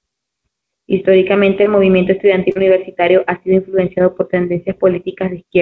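A speech clip with two cases of short concealed packet loss, at 1.64 to 1.67 s and at 2.51 to 2.57 s, just before "universitario ha sido influenciado". Audio arrived too late. The receiver extended the previous sound, then blended back. Each gap is a brief smear.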